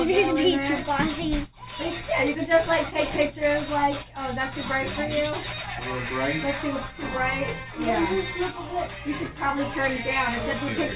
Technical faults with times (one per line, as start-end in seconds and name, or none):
none